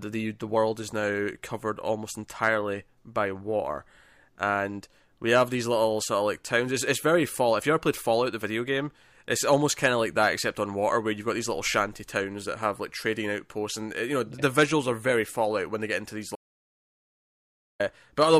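At 16.36 s the speech cuts off abruptly and the track falls into silence, with no room tone or background hiss underneath, until the sound snaps back mid-flow at 17.80 s. About 1.44 s of speech is simply missing. This is an audio dropout to silence, likely caused by the input signal being lost briefly, through a disconnected device, a failed link or a momentary mute, while the recorder kept writing silence.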